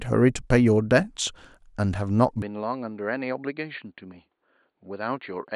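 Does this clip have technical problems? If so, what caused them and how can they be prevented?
Yes. At 2.42 s the speech abruptly goes dull and a fair bit quieter, with nothing above 4.5 kHz and a faint new noise floor, and stays that way to the end. That's likely the input switched to a poorer device. Locking the input device in system settings prevents it.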